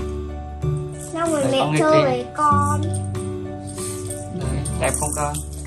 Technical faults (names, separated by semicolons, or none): none